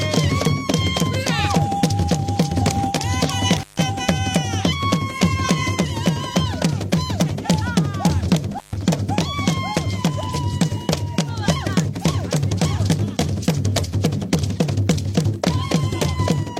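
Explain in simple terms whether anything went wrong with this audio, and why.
A loose cable or plug briefly lost contact twice, an intermittent contact fault. At 3.58 to 3.79 s and again at 8.50 to 8.82 s the connection opened for about 140 ms. The sound drops out with a crackle at each edge, leaving faint hiss in the gap.

At 10.29 s the decoder lost a short stretch of compressed data, about 43 ms, which fits a single missing frame. This is AAC frame loss with concealment. The decoder patched the hole by guessing from the sound just before it, so that instant comes out as a brief smeared, noisy or phasey patch.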